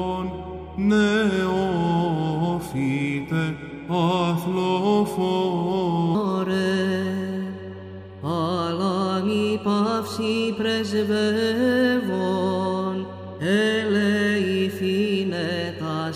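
A playback or editing stage likely locked onto the wrong clock from 6.15 s onward, running the rest of the audio at 1.21 times its recorded speed until the end of the clip. Because speed and pitch are tied together here, the sound abruptly becomes hurried and lifts by roughly three semitones at that point. Every sound is squeezed shorter and brighter, a section at the wrong speed set sharply against the natural-sounding first six seconds.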